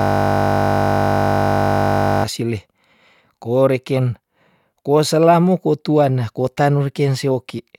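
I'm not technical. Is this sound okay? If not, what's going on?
No. From the very start to about 2.24 s there's a system hang loop: a frozen system replays one 20 ms scrap over and over, making a steady 50 Hz buzz.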